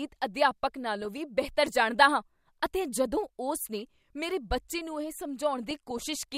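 At 1.02 to 1.18 s, just before "ਬਿਹਤਰ ਜਾਣਦਾ ਹਾਂ ਅਤੇ", and again at 5.63 to 6.03 s, after "ਮੇਰੇ ਬੱਚੇ ਨੂੰ ਇਹ", the speech breaks into DAB burbling. Bit errors slip past error correction into the MP2 data, so corrupted samples put short blips of noise in single sub-bands, and corrupted scale factors make sub-bands jump in level for up to a frame. The first burst fits about seven frames at a bit error rate near 0.4 percent. The longer second burst is lighter.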